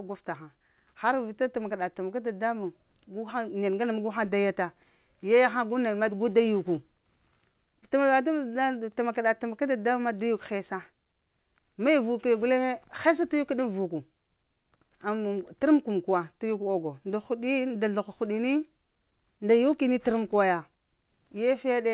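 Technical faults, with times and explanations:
Nothing stood out as a fault on listening to this speech, and the narrow telephone band of its A-law G.711 coding is simply how that line carries sound.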